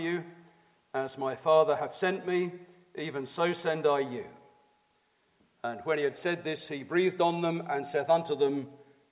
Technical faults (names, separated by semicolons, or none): none